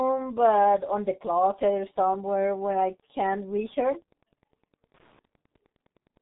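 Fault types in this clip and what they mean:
Wi-Fi interference: A nearby radio's beacon, rectified by the audio circuit, gives a steady tick every 102.4 ms, roughly ten per second, sitting about 40 dB below the speech.
G.723.1 codec: Heavy low-rate telephony coding at 6.3 kbit/s removes everything above 3.8 kHz, leaving the speech muffled and hoarse with smeared, indistinct consonants.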